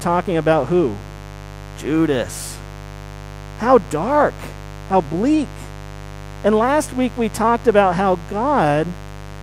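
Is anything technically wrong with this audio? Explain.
Yes. Mains buzz runs throughout: switching spikes twice per 50 Hz cycle leave harmonics into the kilohertz range, producing a raspy buzz only about 15 dB below the speech.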